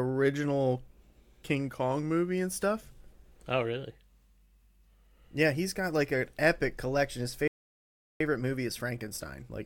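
At 7.48 s the player most likely ran out of buffered data or had its thread blocked, producing a playback stall: the speech cuts off mid-flow and the output stays silent for about 0.73 s, until 8.20 s, before resuming.

From 8.20 s to the end, the player works off that backlog with time-compressed catch-up, snipping out small slices and cross-fading the joins to play at 1.1 times normal speed. The speech sounds hurried but keeps its normal pitch.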